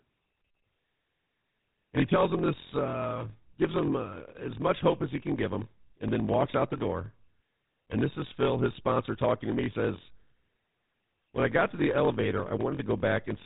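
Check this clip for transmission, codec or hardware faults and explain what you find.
Two faults run through the whole speech clip.

Block size mismatch (padded), throughout: short zero-filled gaps in every block cause a 43.1 Hz buzz and a 0.938× slowdown, which fits 1024-sample reads. The timbre stays normal, which rules out a sample-rate mismatch.

GSM full-rate codec, throughout: pulse-excited vocal-tract modelling gives a gravelly, buzzy roughness with nothing above 3.8 kHz, consistent with GSM at 13 kbps. That roughness distinguishes it from simple low-pass filtering.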